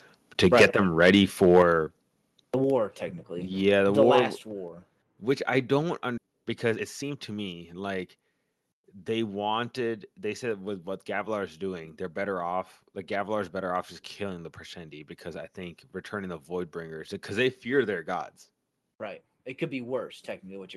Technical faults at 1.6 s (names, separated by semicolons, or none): microphone overload; microphone volume stepped down